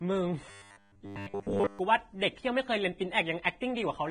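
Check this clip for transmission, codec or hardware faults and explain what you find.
Two faults are audible in this speech clip: heavy codec damage for its whole length and a short robotic stretch near the start.

Throughout, the audio shows Vorbis compression damage, likely from encoding at a low rate around 22 kbps. The treble that survives has been quantised so coarsely that its fine detail turns into hiss-like noise, leaving the speech grainy, with roughened tones and smeared consonant attacks.

From 0.51 to 1.79 s, the speech turns into robotic sound from repeated short buffers. It has a rigid, metallic 100 Hz buzz that still loosely tracks the speech. This is likely caused by audio arriving late, with playback filling the gaps by looping roughly 10 ms chunks. Most of the real audio in that span is replaced by these repeats.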